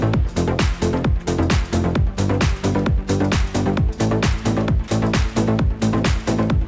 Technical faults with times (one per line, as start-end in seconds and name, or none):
4.88-4.91 sound dropped by the voice detector